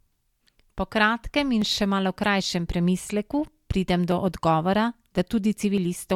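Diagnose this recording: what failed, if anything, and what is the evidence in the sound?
The fault sits at the driver or buffer stage. Regular clicks run through the speech from 0.78 s to 5.78 s, about seven in all, one every 0.83 s. That steady spacing points to clock drift buffer slips. The likely cause is two devices on separate clocks that disagree by several hundred parts per million. The buffer between them drifts until a few tens of samples are dropped or repeated, and each slip is heard as a click.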